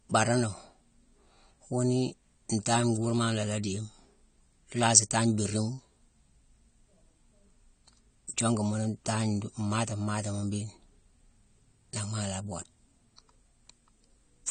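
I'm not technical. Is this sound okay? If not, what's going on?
No. The speech carries plainly audible compression damage from start to finish. Nothing is heard above about 9 kHz, so the crisp top end is missing. This is likely AAC compression, which saves space by discarding detail the encoder judges unimportant.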